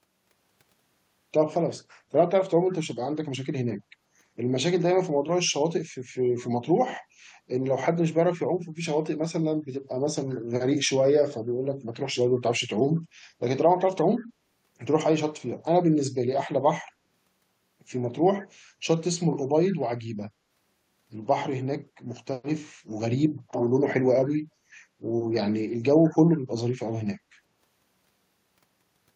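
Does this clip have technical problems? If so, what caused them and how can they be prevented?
Yes, a brief echo leak at 12.35 to 12.4 s and 12.96 to 13.0 s: very faint scraps of speech returning 140 ms late. That discrete delay, unlike reverb's smeared tail, likely comes from a far-end speakerphone's echo canceller letting some sound through. A headset there would prevent it.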